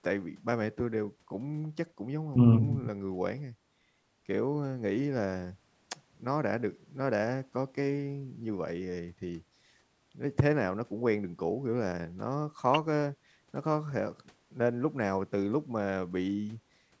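No faults found in this speech; the call microphone processing is working as intended, with its high-pass trimming the lowest bass and nothing present above 8 kHz.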